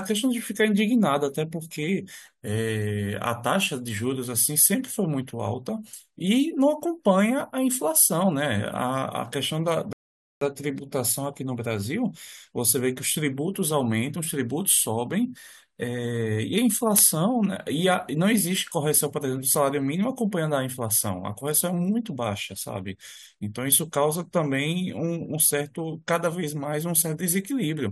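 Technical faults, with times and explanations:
9.93–10.41 s, rebuffering stall: the speech drops to silence for about 0.49 s, then carries on from exactly where it broke off, with nothing skipped. The player emptied its downloaded audio and waited for more data, so the gap adds time without losing any sound.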